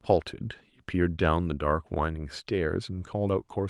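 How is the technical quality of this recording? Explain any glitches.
No audible glitches or faults.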